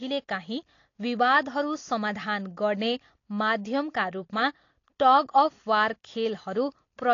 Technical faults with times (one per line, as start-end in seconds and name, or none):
0.00-7.13 AAC compression